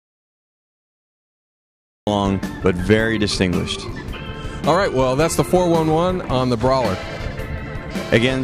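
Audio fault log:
0.00 to 2.07 s, audio dropout to silence: the clip begins already cut out, in silence with no room tone, until sound enters abruptly at 2.07 s. The input was likely lost while recording carried on writing silence. The waveform shows a flat line, and the spectrogram is empty.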